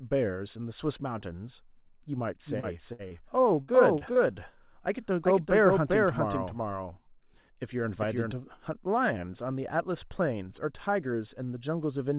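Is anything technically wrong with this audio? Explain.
Yes. The speech carries three kinds of fault, all heard through a call path whose band stops at 4 kHz, which fits a narrowband telephone codec such as G.711.

Doubled audio track, from 2.46 s to 8.32 s. A second full-band copy of the speech runs roughly 0.4 s behind the first, at about the same loudness. The likely cause is the signal being captured again by a slower route, or two copies left out of step. The echo has no room tail or decay, and it appears and disappears abruptly at those two times.

Short concealed packet loss at 2.60 s, 3.08 s, 3.98 s and 4.13 s. Each time about 30 ms of audio failed to arrive in time, and the receiver filled the gap by extending the preceding sound before blending back into the real signal. Each one is heard as a brief smear or wobble, and a short consonant there can drop out.

Burst of packet loss at 2.93 s and 3.62 s. 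Each time about 60 ms in a row went missing. Concealment stretched the last sound and faded it as the gap went on, so voiced sound turns into a short held buzz and unvoiced sound into a dying hiss. The speech then resumes further along, with the lost stretch gone.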